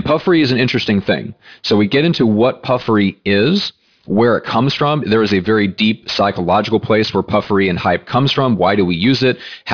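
Aliasing throughout the speech: gritty sibilants fold back below a hard spectrogram edge at 5.5 kHz, about 20 dB down, suggesting unfiltered downsampling to roughly 11 kHz.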